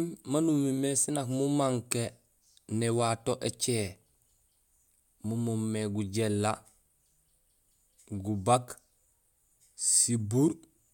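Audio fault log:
No fault is present in this speech recording; the signal reaches the listener intact, with no breaks or interruptions anywhere along its course.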